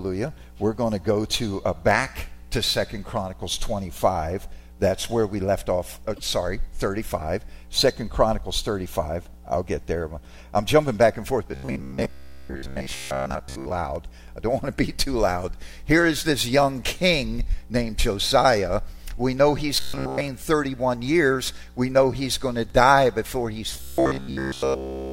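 At 6.15 s there are repeated frames. One block of about 26.1 ms plays twice, so the sound stutters briefly. The block was written or sent again, and the clip grows by 26.1 ms.

From 11.52 to 13.71 s, from 19.80 to 20.21 s, and from 23.74 s to the end, the sound turns into a robotic buzz at a fixed 66.7 Hz. This is likely from repeated short buffers: a 15 ms slice keeps looping while most of the real audio is skipped. In the last stretch, none of the real audio gets through.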